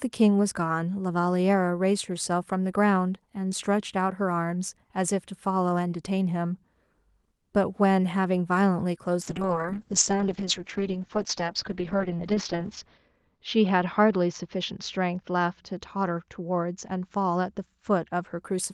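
From 9.22 s to 18.47 s, a call bitrate drop narrows the bandwidth from 12 kHz to 6 kHz. The speech turns rough and muffled, which fits Opus near 7 kbps.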